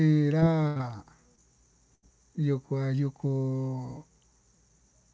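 At 0.40 to 0.43 s, short concealed packet loss leaves a brief smear where about 20 ms of speech was replaced by a continuation of the preceding sound. From 0.67 to 0.77 s, a burst of packet loss loses about 80 ms: the last sound is held as a fading buzz or hiss, then speech resumes further on with that stretch gone. A second short concealed packet loss follows immediately at 0.77 to 0.81 s, then another at 1.35 to 1.39 s, each a quick wobble of about 20 ms. A second burst of packet loss at 1.95 to 2.04 s again fades the held sound before skipping ahead about 80 ms. Throughout, the call path leaves nothing above 8 kHz, which fits a wideband call codec such as G.722.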